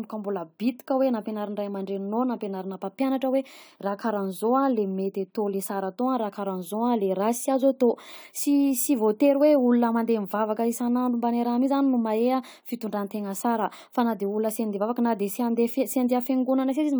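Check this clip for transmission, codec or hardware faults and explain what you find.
Nothing stood out on listening to this speech recording that would point to a transmission, codec or hardware problem.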